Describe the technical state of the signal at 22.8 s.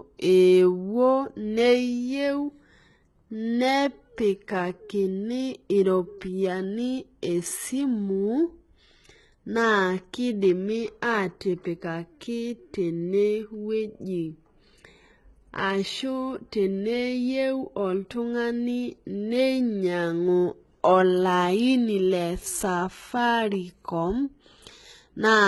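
At 22.8 s the speech carries the same heavy damage heard across the whole clip, likely HE-AAC compression at a bitrate near 16 kbps. Unlike a plain low-pass, the treble is still present, but it is copied up from lower bands, so s sounds turn gritty and metallic, with nothing above 11.8 kHz.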